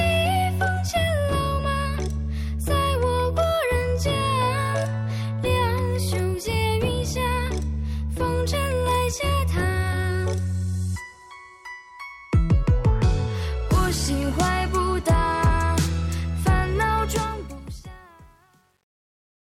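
From 17.07 s to the end, the fade-out turns gritty, then grows worst from 17.67 s: truncation distortion, quantised without dither, consistent with roughly 9-bit resolution.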